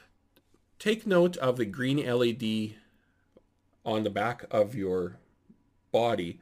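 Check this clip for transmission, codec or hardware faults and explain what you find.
Nothing stood out on listening to this clip.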